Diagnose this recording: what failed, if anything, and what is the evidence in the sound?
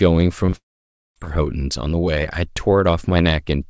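Short concealed packet loss on the network leg: brief smears at 0.46–0.50 s and 0.50–0.54 s, each about 20 ms bridged by the decoder. Neither falls silent.

A long network dropout is the likely cause from 0.56 to 1.18 s: the fill fades into about half a second of silence, and the sound resumes with that stretch missing.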